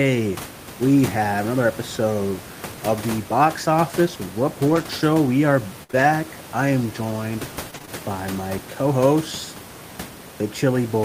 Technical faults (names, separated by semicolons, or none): scattered short gaps